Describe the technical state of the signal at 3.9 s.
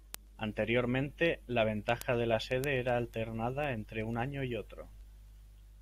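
Word clock ticks run through 3.9 s, part of a series from 0.15 s to 5.76 s. The receiving device's clock is off by roughly 150 ppm from the sender's, so a sample is dropped or repeated about every 0.15 s, heard as sharp, regular ticks.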